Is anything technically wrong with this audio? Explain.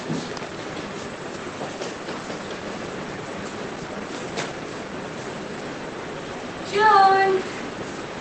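No, there's nothing technically wrong.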